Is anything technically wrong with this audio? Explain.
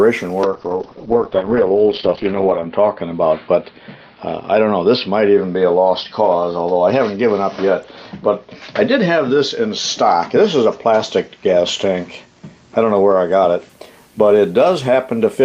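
Yes. A call bitrate drop runs from 0.45 s to 13.75 s. The encoder was forced to spend far fewer bits, the coarseness suggesting a fall from about 32 to 7 kbps, bottoming out for 2.2 s. The sound turns rough and muffled, with the top end cut off around 6 kHz.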